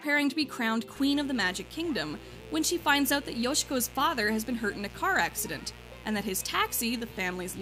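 A steady, raspy buzz enters at 0.95 s and runs unbroken to the end, sitting roughly 20 dB below the sound it accompanies. This is mains buzz on a 60 Hz supply: sharp switching spikes from a dimmer, rectifier or unshielded run leak into the signal path twice per cycle, 120 times a second. The sharp, rasping edge of the buzz comes from harmonics of that 60 Hz that extend well above the fundamental.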